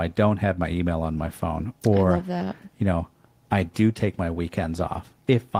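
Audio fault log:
No faults are present in this speech clip.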